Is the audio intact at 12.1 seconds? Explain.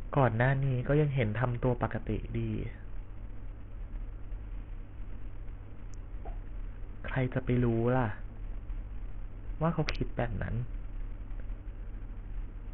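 No. At 12.1 s, as throughout, the speech sounds heavily damaged, likely by Bluetooth SBC compression at a low rate, one that fits about 48 kbps. Starved upper sub-bands leave the treble flickering over gritty noise, and a spectrogram shows patchy, blocky gaps above the midrange.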